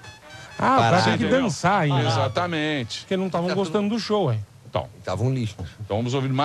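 No technical faults can be heard anywhere in the clip.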